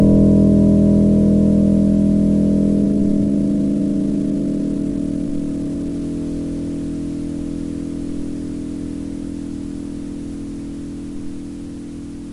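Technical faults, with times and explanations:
2.78–6.06 s, time-stretched section: the sound suddenly runs about 1.35 times faster at unchanged pitch, rushed, likely software squeezing it by dropping short pieces.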